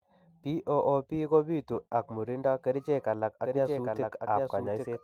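From 1.02 to 2.55 s there's a call bitrate drop: the encoder gets squeezed from 32 to 17 kbps, bottoming out for about 1.47 s, so the speech goes coarse and a bit watery, with the top end dulled, until the rate climbs back.

Then at 3.45 s a doubled audio track kicks in abruptly and runs to the end. A full-band second copy trails roughly 0.7 s behind, a few dB quieter, with no decay or room colour. Most likely the same signal was captured again through a slower path.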